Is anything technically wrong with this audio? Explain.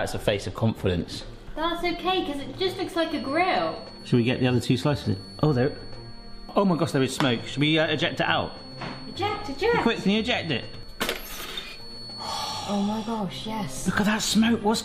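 Yes. From 2.97 to 12.72 s there is a feedback whistle at 4.4 kHz, about 20 dB below the sound. It is likely a loudspeaker-to-microphone loop held just short of runaway. On a spectrogram it shows as one thin horizontal line that slowly brightens and fades.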